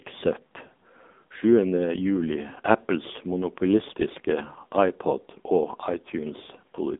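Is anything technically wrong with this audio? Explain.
Yes. The whole clip has passed through an AMR narrowband mobile codec, the AMR-NB speech coder used on 2G and 3G calls. The speech is squeezed into a line band of roughly 200 Hz to 3.7 kHz, with nothing above 3.8 kHz. The codec rebuilds the voice from a vocal-tract model excited by sparse pulses, and the heavy damage fits a low mode near 6.7 kbps, so the speech sounds buzzy, thin and synthetic. On a spectrogram, everything above 3.8 kHz is blank, with a sharp ceiling and missing low bass.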